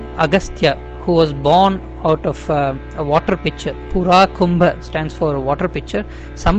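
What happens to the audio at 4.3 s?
Nothing goes wrong at 4.3 s; the audio there plays through intact, with no dropout, click or other fault.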